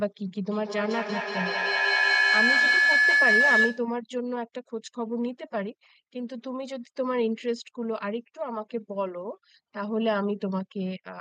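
From 0.51 s to 3.92 s the speech is swamped by a feedback howl. A microphone is picking up a loudspeaker on the same call, and the loop gains level on each pass. It settles on a tone near 1.5 kHz, pulsing about every fifth of a second, and peaks about 7 dB above the speech. Unlike an ordinary echo, whose repeats fade away, these grow louder and narrow to one pitch.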